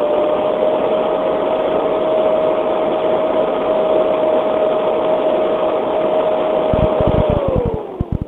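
From 6.74 to 8.23 s there's a train of clicks, about 15 a second at an uneven pace, roughly twenty pops poking well above the sound, likely interference.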